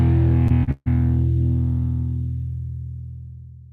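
Within the first second the audio smears twice in quick succession: a brief wobble from 0.47 to 0.52 s and another from 0.64 to 0.69 s. These are short concealed packet loss. About 20 ms and then 40 ms of the stream never arrived in time, so the receiver extended the preceding sound for roughly 23 and 35 ms before blending back into the real signal. Almost immediately afterwards, from 0.71 to 0.88 s, a longer stretch turns into a held, fading continuation of the last sound, dropping out entirely for about 30 ms before the audio picks up again further along. This is a burst of packet loss. Around 140 ms of the signal was lost, and the receiver stretched the last received sound over roughly 147 ms, turning it down as the gap went on. When playback resumes, the section in between is simply missing.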